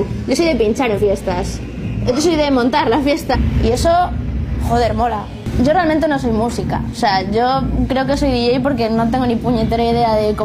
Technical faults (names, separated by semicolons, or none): damaged data in a compressed stream